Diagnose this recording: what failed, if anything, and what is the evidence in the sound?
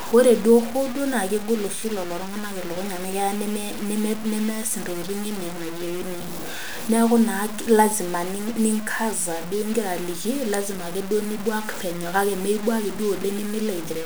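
The speech carries low bit depth without dither for its whole length, most likely from a sample-format conversion that truncated the audio to about 5 bits. The error tracks the signal: syllables sound grainy, and quiet tails crackle between adjacent levels or cut to silence. Error sits roughly 15 dB below the signal. On a waveform, decays show visible staircase steps; a spectrogram shows broadband hash appearing and vanishing with each word rather than a steady noise floor.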